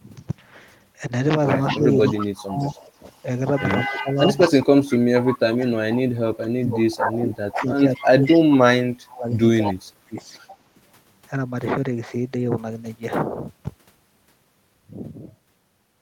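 From 1.72 to 2.76 s, and again from 3.87 to 10.19 s, the speech is suppressed in double talk. It dips by up to about 30 dB, thins and drops out in pieces, likely because the echo canceller ducked both directions while both sides spoke. Unlike echo, nothing is added; the voice is taken away.

Echo leak overlaps these stretches at 2.05–3.23 s, 3.6–4.55 s, 4.93 s, 7.96–8.38 s and 9.65–9.73 s. A delayed copy of the voice trails it by about 200 ms, some 10 to 20 dB lower. This is likely loudspeaker pickup the echo canceller failed to remove. The extra delayed sound sets it apart from suppression.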